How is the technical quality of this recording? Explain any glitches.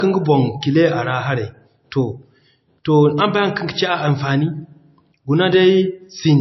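The speech sounds dull and band-limited throughout, with nothing above 5.8 kHz. It is likely low-bitrate audio saved at a high bitrate: an MP3 at about 25 kbit/s re-encoded at 320 kbit/s, which cannot restore the removed top end.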